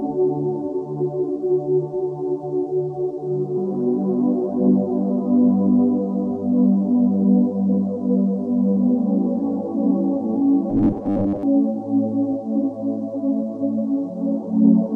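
From 10.70 to 11.43 s the sound turns into a rigid, metallic buzz at 100 Hz, robotic sound from repeated short buffers. The likely cause is late-arriving audio, with roughly half of it replaced by a repeated 10 ms block. A spectrogram shows evenly spaced 100 Hz harmonic lines, and the waveform shows identical repeating cycles.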